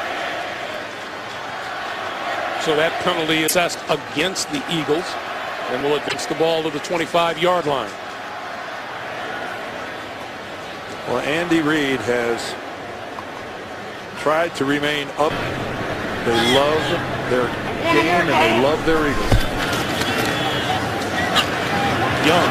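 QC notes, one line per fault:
3.44–3.53 s and 6.05–6.15 s, damaged data in a compressed stream: two breaks of about 0.1 s each, where part of the encoded stream was corrupted and the decoder could not read those frames as written. It loses frame sync and scans for the next valid header, so the output in those spans is misdecoded or missing rather than the intended audio. That is why each one is heard as a brief disruption that cuts across the surrounding sound.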